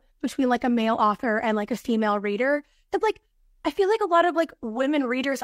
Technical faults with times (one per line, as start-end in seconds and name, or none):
none